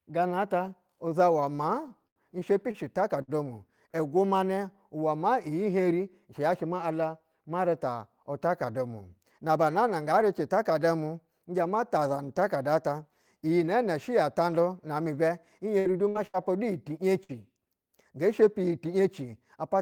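From 1.55 to 3.31 s the speech shows repeated stalls (stutter). Packets arrived late or too slowly, so the jitter buffer ran dry six times. Each time the receiver stretched the last sound to cover the wait, about 226 ms in all, roughly 13% of that stretch, with the longest hold lasting 90 ms. Unlike packet loss, nothing is cut out. The speech simply halts and drags, then picks up where it left off.

From 9.23 to 9.58 s a jitter buffer speed-up occurs. Too much audio had built up in the buffer, so the receiver trimmed it back by repeatedly removing tiny pitch-period-sized pieces, about 40 ms in total. The speech plays at 108% of normal speed over that short span and sounds briefly hurried. What separates this from a pitch shift or a tape-speed change is that the pitch stays the same. Only the pace quickens.

From 15.79 to 17.32 s there is repeated packet loss, which gives a robotic sound. 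Four holes appear in close succession, and each is patched by extending the preceding sound. About 236 ms is filled this way, roughly 15% of the stretch, with the longest gap at 68 ms. Unlike the earlier stalls, real content is gone here, about 240 ms, so the result is choppy instead of merely slowed.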